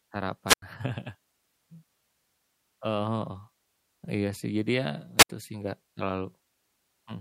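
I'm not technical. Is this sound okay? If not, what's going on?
No. The speech cuts out twice, from 0.47 to 0.62 s and from 5.18 to 5.29 s. Each time you hear a quick burst of hiss, then near silence, then the voice returns. The silent gap lasts 91 ms the first time and 69 ms the second. This is a wireless microphone squelch dropout. The radio link weakened, so the receiver muted itself instead of passing on loud static.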